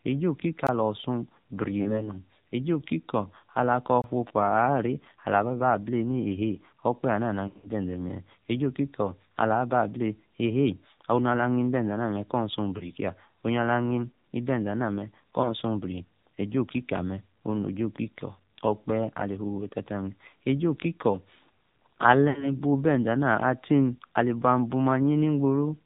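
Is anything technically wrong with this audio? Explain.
Yes. There are three kinds of fault in this speech clip.

Throughout, the sound carries AMR narrowband mobile codec damage. Nothing above 4 kHz survives, giving a thin telephone band. The codec rebuilds the voice from a vocal-tract filter excited by a few pulses per subframe, and at this bit budget the damage is plainly audible as a buzzy, synthetic edge on voiced sounds, consistent with a low mode of about 7.4 kbps.

A block of digital silence occurs at 0.67 s and again from 4.02 to 4.04 s. The first lasts 17 ms and the second 23 ms. The second length matches a 1024-sample block of zeros. The signal drops to dead silence and returns with no fade, so each gap sounds like a short tick or hole.

Lost AMR speech frames appear at 1.82 to 2.06 s, 7.48 to 7.68 s, 12.78 to 12.87 s, 15.42 to 15.50 s and 22.30 to 22.57 s. The decoder concealed each missing 20 ms frame by repeating the last good pitch and filter settings at falling gain. 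Single losses near 12.8 and 15.4 s are brief dips or warbles. The 7.5 s event is the worst, with 140 ms missing over 160 ms and an 80 ms run, so the sound smears and sags before recovering roughly.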